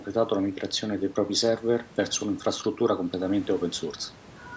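No technical faults are audible.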